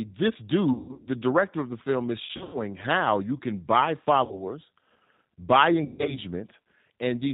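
G.729 codec, throughout: the 8 kbit/s G.729A encoding rebuilds the speech from a filter, a pitch predictor and a few pulses, so nothing passes above 4 kHz and everything sounds plainly rough and synthetic.

VoIP packet loss concealed by the speech codec, at 0.73–1.08 s, 2.25–2.58 s, 4.25–4.46 s and 5.85–6.20 s: the decoder extrapolates from its last frames and fades them. This stretches the sound into a buzzy tone or coloured noise that dims, with about 40 to 220 ms lost per event and runs up to 140 ms. The speech stays weak briefly after each.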